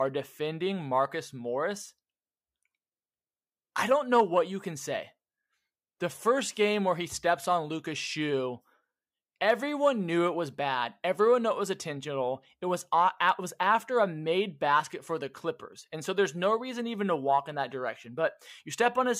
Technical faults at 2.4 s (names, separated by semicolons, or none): none